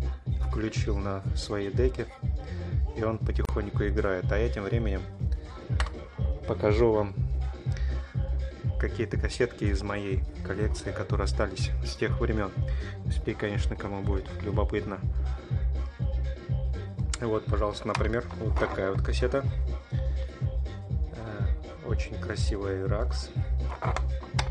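At 3.45 s the sound drops out for about 36 ms, until 3.49 s. It is a short hole of silence with edges smeared by the codec, and the sound resumes exactly where it left off with nothing lost. This is a gap at a join of encoded pieces. Two separately encoded segments were spliced without trimming, so the encoder's start-up delay and the padding of the previous piece's final frame remain as dead air at the seam.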